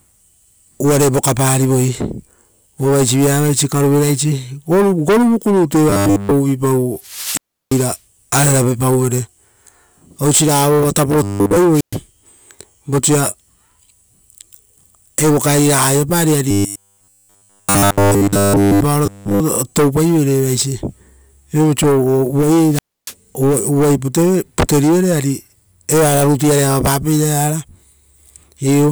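A rigid, metallic buzz at a fixed 100 Hz is heard in the speech at 5.90–6.31 s, 11.23–11.57 s, 16.51–18.81 s and 19.06–19.40 s. This is robotic sound from repeated short buffers, likely caused by new audio arriving too seldom, so roughly 10 ms stretches are looped in place of the real signal throughout each span. Separately, a rise of hiss drops into near silence and the voice then comes back at 6.99–8.00 s (muted for 0.34 s, just after which comes "ararave pauvere"), 11.71–12.00 s (0.12 s) and 22.69–23.14 s (0.29 s). That is wireless microphone squelch dropout, where the FM signal fades until the receiver mutes itself.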